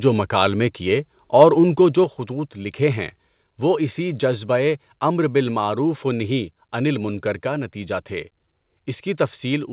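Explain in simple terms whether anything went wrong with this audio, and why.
At 1.41 to 1.44 s, right after "جو مکالمے کیے" and just before "اُن کو جو خطوط", the loudest moment turns briefly harsh and crackly. This is microphone overload. The sound reached the very top of what the microphone's converter could hold, so the peaks were flattened instead of captured whole. That flattening adds a rough, buzzy edge. A small share of that short stretch was cut off this way, most likely because the microphone's input level was set too high.

At 2.04 s, between "اُن کو جو" and "خطوط لکھے ہیں وہ", the speech and the background suddenly get quieter together in a single step. This is the microphone volume being stepped down. The drop comes about 0.6 seconds after the distorted peak. That timing points to the call software noticing the overload and likely turning the microphone's input down once to stop it happening again. 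The speech continues at this lower level, and because this passed over a phone-style call line, there is nothing above 4 kHz at any point.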